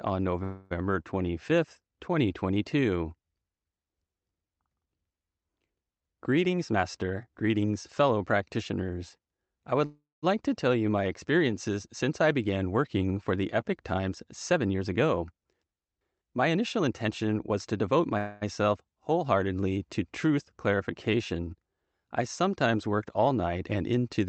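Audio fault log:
0.43–0.73 s, 9.86–10.24 s and 18.18–18.43 s, call audio freeze: the speech stops advancing for 0.27 s, 0.37 s and 0.23 s while the receiver fills the wait, likely because packets stalled and the jitter buffer ran empty. The last sound is extended as a fading buzz or hiss, sinking into about 0.19 s of silence in the middle stall. On a spectrogram the harmonics smear into flat horizontal bands, and the waveform shows a decaying tail. Speech then resumes intact, just later.
6.44–8.17 s, 14.53–14.93 s and 16.49–18.15 s, jitter buffer speed-up: the buffer held too much audio, so the receiver cut out pieces of one or a few pitch periods again and again to catch up. Speech runs at about 115% and then 113% speed without any rise in pitch, dropping roughly 0.3 s, 70 ms and 0.2 s. It sounds hurried. A spectrogram shows the harmonic lines at their normal spacing, with syllables packed more closely in time, all below a codec ceiling near 8 kHz.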